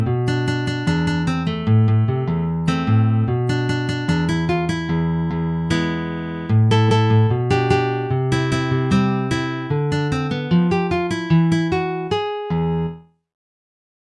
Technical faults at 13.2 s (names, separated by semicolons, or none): none